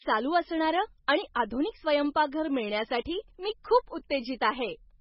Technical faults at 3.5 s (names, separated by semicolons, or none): MP3 compression